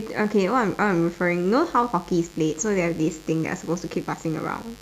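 A steady, raspy buzz runs underneath the speech from start to finish, sitting roughly 25 dB below it. This is mains buzz on a 50 Hz supply: sharp switching spikes, such as those from a dimmer, a rectifier or an unshielded cable, leak into the signal twice per mains cycle, 100 times a second, spreading harmonics of 50 Hz up into several kHz.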